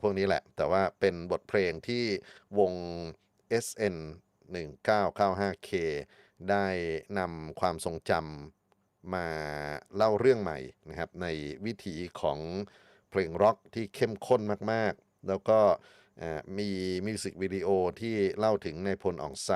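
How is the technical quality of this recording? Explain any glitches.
Listening carefully, nothing in the recording stood out as a glitch or technical problem.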